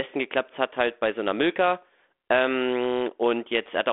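No technical faults can be heard in this recording.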